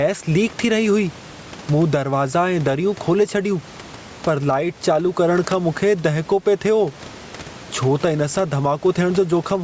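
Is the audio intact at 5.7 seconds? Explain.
No. At 5.7 seconds the clip shows gain pumping, as it does throughout. The level swings by around 10 dB, with the room noise sitting about 29 dB below the speech, and the speech sounds squashed. This is likely caused by input gain set far too high, with a fast limiter or compressor clamping down on every peak.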